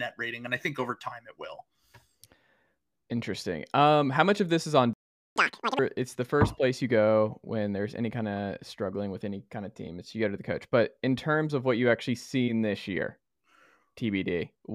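At 4.93 s the speech stops dead in mid-flow. Silence holds until 5.36 s, about 0.43 s. This is a playback stall. The player likely ran out of buffered data or had its thread blocked. The speech then resumes from where it stopped.

From 5.36 s to 5.79 s comes catch-up at higher speed. The player races through its backlog at twice normal speed. Pitch jumps by roughly ten semitones, giving a squeaky, hurried sound. Normal speed and pitch return at 5.79 s.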